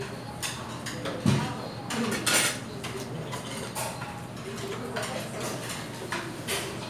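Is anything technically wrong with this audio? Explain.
No, nothing technically wrong stood out on listening to this recording of sounds.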